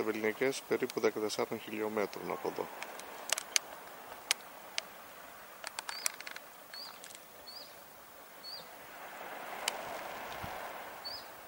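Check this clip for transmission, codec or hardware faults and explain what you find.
One fault is present: buffer tearing from 9.46 s to 10.67 s. A steady robotic buzz at 188 Hz rides on the sound, which fits a 256-sample buffer. The writing side and the reading side of the ring buffer have drifted, so in every period a small sliver, a couple of percent, is audio from roughly 20 ms earlier, butted against current audio with hard joins. Unlike an underrun, which leaves silent gaps or clicks, this rattle is continuous, locked to the buffer rate, and follows the signal.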